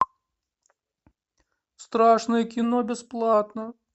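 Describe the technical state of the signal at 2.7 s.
At 2.7 s the speech jumps about 6% fast and a semitone sharp, from 2.63 to 3.33 s, then snaps back. That's likely a drift correction step from clock-matching software.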